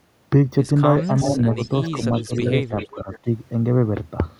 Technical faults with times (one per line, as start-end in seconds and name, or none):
1.02-3.19 echo leak
1.24-2.01 speech suppressed in double talk
2.27-2.44 speech suppressed in double talk
2.91-3.27 speech suppressed in double talk